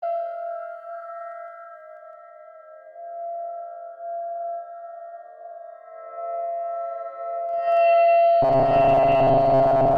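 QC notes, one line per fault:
1.24–2.43 s, zipper noise: the music drops by about 10 dB in coarse 2 dB jumps, roughly seven a second, with nothing smoothing between them, so each jump clicks and you get a slow ticking riding on the fade.
7.47–7.81 s, zipper noise: same thing going the other way, about 10 dB back up in 2 dB steps, but quicker, around twenty a second, so the clicks blur into a short zipping rasp while the level climbs.
8.42–9.97 s, robotic sound from repeated short buffers: the music turns into a stiff metallic buzz at 134 Hz, likely because audio wasn't arriving fast enough and a short chunk of about 7.5 ms kept getting replayed, with roughly half the real material skipped.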